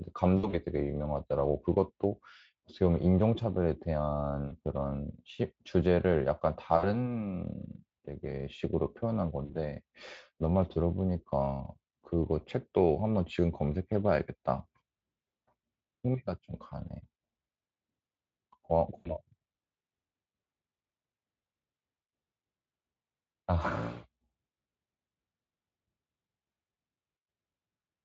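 At 0.37 to 0.60 s, 4.47 to 4.55 s, 6.77 to 6.95 s, 9.45 to 9.55 s and 18.97 to 19.17 s, the speech shows VoIP packet loss concealed by the speech codec, here Speex. The decoder fills each gap by repeating its last pitch and spectral shape while lowering the gain. The sound is a brief buzzy or noisy smear that dies away. On a spectrogram, harmonics run flat and fade. In the waveform, the envelope sags before recovering. The first burst covers about 160 ms, in runs up to 60 ms.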